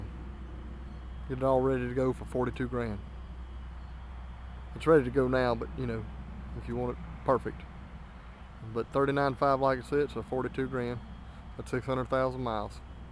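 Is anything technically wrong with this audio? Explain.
No, nothing technically wrong can be heard in this audio. The sound runs without any audible fault at any point.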